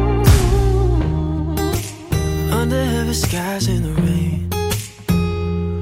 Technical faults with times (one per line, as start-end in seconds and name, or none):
4.90 dropped samples